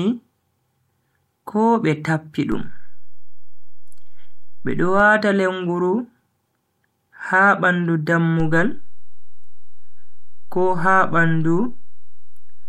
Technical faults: DC step

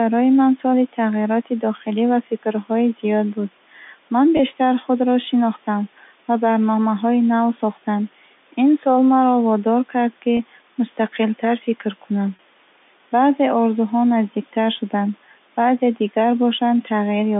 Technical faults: packet loss with pitch repetition

